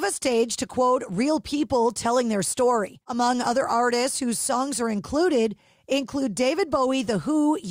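No audible technical faults.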